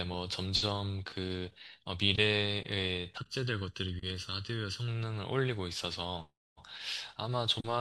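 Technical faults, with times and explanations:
3.18–4.88 s, channel delay (comb filtering): one channel runs late by about 0.7 ms, so when both are summed to mono the shared signal cancels at evenly spaced frequencies, the first near 700 Hz, leaving the speech hollow and phasey.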